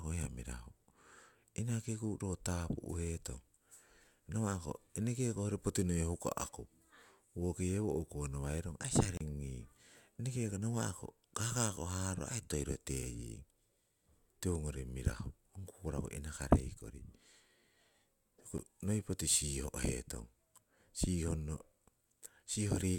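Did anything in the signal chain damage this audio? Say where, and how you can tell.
Yes: blocks of digital silence from buffer underruns dropped the speech out at 9.17–9.21 s (32 ms) and 18.58 s (about 11 ms, fitting a 512-sample buffer).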